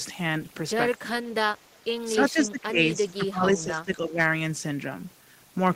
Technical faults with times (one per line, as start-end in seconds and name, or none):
1.00-1.14 speech suppressed in double talk
2.15-4.19 speech suppressed in double talk